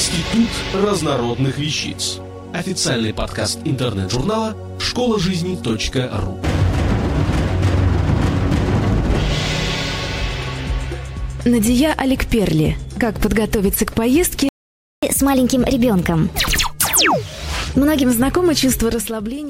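The audio drops out in a playback stall from 14.49 s to 15.03 s, about 0.54 s of silence in mid-flow, likely because the player ran out of buffered data or its output thread was blocked. From 15.03 s to 18.03 s there is catch-up at higher speed: the player works through its backlog at 1.15 times normal rate by resampling, so tempo and pitch both rise, the pitch by roughly two semitones.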